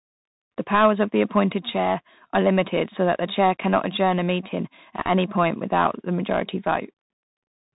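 A speech recording carrying Bluetooth CVSD headset codec damage throughout. Nothing above 4 kHz survives. The one-bit delta coding, which fits 64 kbps CVSD, leaves granular hiss, scratchy s sounds and plainly audible distortion.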